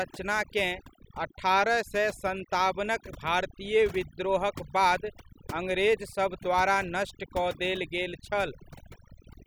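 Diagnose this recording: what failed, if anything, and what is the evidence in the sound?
Overdone noise removal in the processing stage, running the whole way through: the background drops and breaks up into twinkling specks.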